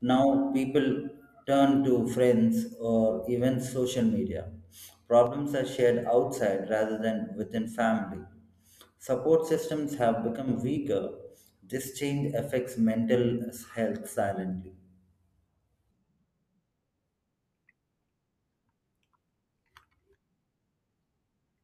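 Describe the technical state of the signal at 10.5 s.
Right after "systems have", from 10.37 to 10.48 s, one channel drops out. The speech falls abruptly by about 6 dB for this brief stretch. Anything carried only in the lost channel vanishes. The likely cause is one stereo channel going silent before the mono sum.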